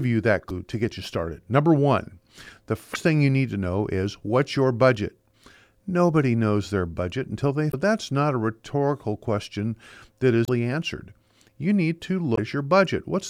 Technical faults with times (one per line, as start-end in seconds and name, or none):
0.47-0.51 damaged data in a compressed stream
2.92-2.96 damaged data in a compressed stream
7.69-7.74 damaged data in a compressed stream
10.44-10.49 damaged data in a compressed stream
12.35-12.38 damaged data in a compressed stream